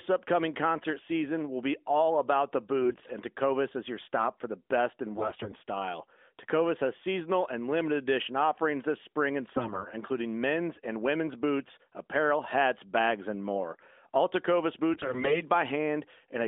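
Speech carried over an AMR narrowband mobile link, band-limited to roughly 250 Hz–3.6 kHz, with brief bursts of AMR bit errors at 2.83–3.12, 5.16–5.61, 9.52–9.87 and 14.94–15.41 s. Flipped low-priority bits turn it hoarse and gargly while pitch and level hold, unlike packet loss, which leaves gaps or smeared repeats. The 9.5 s burst is milder.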